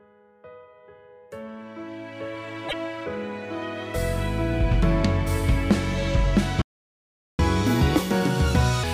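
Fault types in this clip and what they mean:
Damaged data in a compressed stream: corrupted bytes make the decoder lose sync and hunt for the next frame, causing a brief glitch from 2.65 to 2.74 s.
Playback stall: the player was likely starved of data or blocked, so output drops to silence for about 0.77 s, from 6.62 to 7.39 s.
Catch-up at higher speed: the player resamples its backlog at 1.5 times normal speed, raising pitch by roughly seven semitones from 7.39 to 8.84 s.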